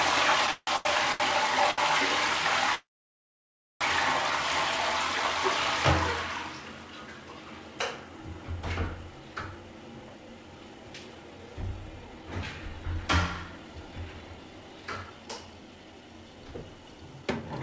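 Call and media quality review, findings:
Repeated stalls (stutter), 0.47 to 1.23 s: four holds of the running sound, about 340 ms filled in total, longest 162 ms, nearly half the span. Jitter buffer underrunning repeatedly as packets arrive late; receiver extends the last sound, fades it in the longer holds, then resumes. Nothing dropped, playback drags.

Short stall from a late packet, 1.71 s to 1.81 s: last sound held about 69 ms with a slight buzz or dip. Jitter buffer briefly empty; playout delay up 69 ms, resumes from the same point.

Call audio freeze, 2.75 to 3.84 s: sound stops for about 1.06 s, mostly silent (about 0.98 s), then continues where it left off with no content lost. Likely packets held in transit and the jitter buffer running dry. Playout delay up about 1.06 s.

Jitter buffer speed-up, 9.56 to 13.03 s and 13.44 to 17.43 s: sound runs fast at unchanged pitch, about 110% then 111%, hurried feel. 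Receiver trimming excess buffered delay by cutting short pitch-period pieces repeatedly, roughly 0.3 s and 0.4 s removed. Band-limited to 8 kHz throughout, consistent with G.722 at 64 kbps.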